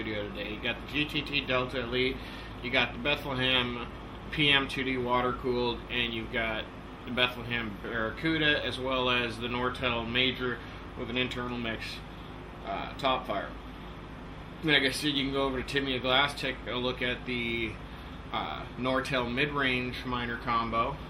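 No technical faults can be heard anywhere in the signal, which stays steady and intact over its whole duration.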